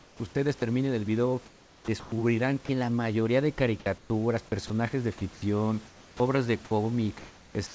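Sound chopped by the voice detector occurs three times: from 0.00 to 0.62 s, from 1.46 to 2.69 s just before "la mayoría de", and from 3.80 to 6.71 s just after it. The likely cause is the sender's voice detector switching transmission on and off, so quiet syllables and word edges were swapped for comfort noise. That covers about 230 ms, 570 ms and 690 ms of each stretch, leaving the speech choppy.

Comfort noise in place of the background appears from 7.67 to 7.74 s. The sender, likely in discontinuous transmission, stopped sending, and the receiver filled roughly 80 ms with steady, featureless noise. It sits about 26 dB below the loud parts, only about 1 dB off the real room noise.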